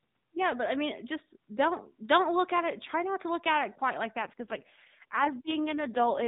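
From 4.2 s, just after "at it quite like", an AMR rate drop turns the narrowband speech rougher and buzzier through the end, consistent with 12.2 falling to 4.75 kbps.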